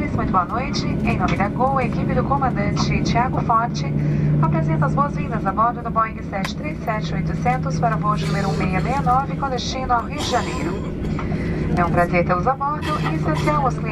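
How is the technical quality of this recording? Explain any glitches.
One glitch stands out: an electrical switching spike at 10.00 s, heard as a sharp snap laid over the sound. A nearby switch, motor or static discharge most likely arced, and the audio line picked up that brief burst. On a waveform it shows as a thin vertical needle peaking around -25 dBFS; on a spectrogram, a narrow full-height stripe.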